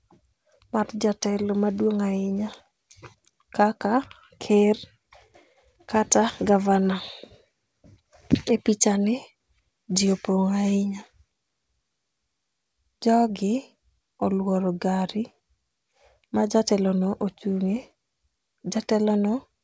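No technical faults are audible.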